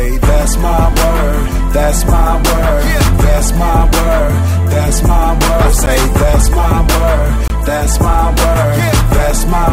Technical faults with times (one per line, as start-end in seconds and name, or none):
5.86 block of digital silence
7.48-7.50 block of digital silence